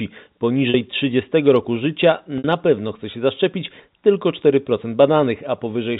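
Packet loss with pitch repetition occurs at 0.70 s and again at 2.38 s, with gaps of 40 ms and 60 ms that fit two and three lost 20 ms packets. The receiver fills each hole by repeating the last pitch period and fading it down, so the speech briefly holds on a buzzy, frozen tone before resuming. The second, longer gap sags further toward silence, heard through the narrow G.711 telephone band.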